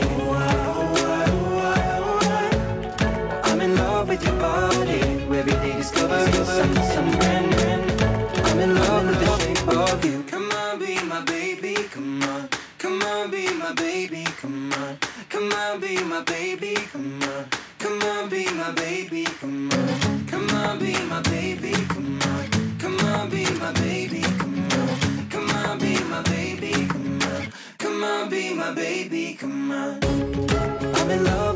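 From 6.09 s to 9.37 s there's a doubled audio track: a second full-band copy of the sound runs roughly 400 ms behind the original and a few dB quieter, with no room colour or decay. It cuts in and out abruptly at both ends, so you get a dry, stuttering echo for those three seconds. The likely cause is the same signal arriving twice, once through a slower path, or an edit leaving two copies out of step. It sits inside audio that has passed through call microphone processing, with nothing above 8 kHz.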